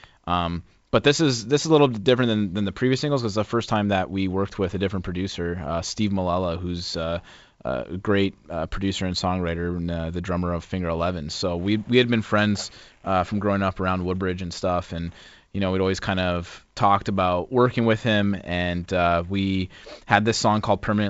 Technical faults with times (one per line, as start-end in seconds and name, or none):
none